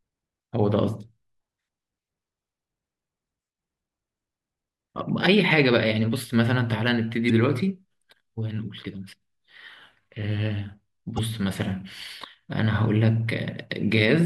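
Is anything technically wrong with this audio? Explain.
Yes. At 7.26–7.30 s and 11.15–11.19 s there is damaged data in a compressed stream. Corrupted frames throw the decoder out of sync while it hunts for the next frame header, leaving a short chirp, squawk, click or hole in the speech.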